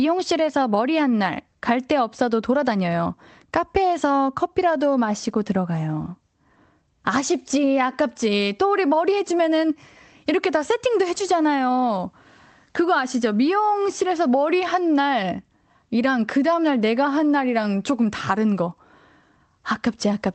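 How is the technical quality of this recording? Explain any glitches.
No glitches can be heard in the speech, which has the band-limited character of a call path, with content above about 8 kHz rolled off and the coding texture expected of an Opus stream at a modest bitrate.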